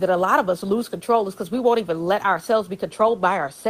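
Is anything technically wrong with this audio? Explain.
No, nothing stood out on listening to this speech clip, and the faint room noise well beneath the speech is simply part of the recording.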